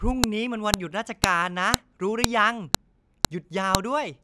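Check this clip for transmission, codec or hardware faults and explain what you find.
One fault recurs through the speech: sharp snaps at 0.24, 0.74, 1.24, 1.74, 2.24, 2.75, 3.25 and 3.75 s, every 0.5 s. They are file headers played as audio, where WAV pieces were joined without removing their header bytes, so those bytes play as samples.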